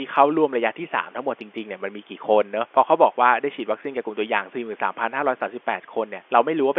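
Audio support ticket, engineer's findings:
No faults found in this engineer's review; the audio matches what call microphone processing and a G.711 telephone line normally produce.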